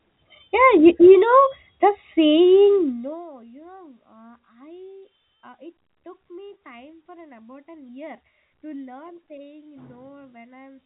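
From 2.74 to 3.28 s a fast ticking zips over the speech as the level falls by about 25 dB: zipper noise, the gain stepping around a hundred times a second without smoothing.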